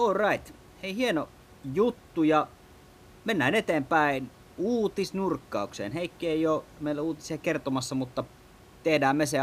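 A speech recording with nothing technically wrong with it, just room noise about 26 dB below the voice.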